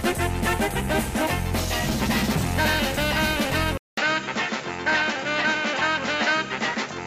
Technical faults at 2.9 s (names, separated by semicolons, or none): none